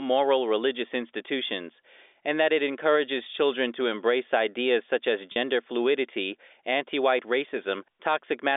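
Packet loss with pitch repetition occurs at 5.32 to 5.36 s in this telephone-band speech recording, between "embrace ideas such as" and "fluidity anti white". About 40 ms of audio went missing, which fits two 20 ms packets. The receiver filled the gap by repeating the last pitch period, so the sound briefly holds on a buzzy, sustained tone before normal speech resumes. The G.711 A-law telephone coding, limited to roughly 300 Hz to 3.6 kHz, is heard throughout as the narrow line band.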